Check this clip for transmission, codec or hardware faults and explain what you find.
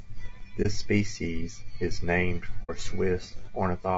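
Two kinds of fault are present: codec damage across the whole clip, and two short dropouts.

Low-delay AAC compression runs throughout this speech. The voice sounds rough and grainy, with noise between the harmonics and a thin, artificial top. This is likely AAC-ELD at a low rate, around 32 kbps. Its short frames resolve pitch poorly.

AAC frame loss with muting occurs at 0.62 to 0.67 s and at 2.63 to 2.70 s. The first is a brief dip, the second a soft-edged hole. The first fits one lost frame, the second two. The decoder zeroed their spectrum, and overlapping windows faded the sound out and back in.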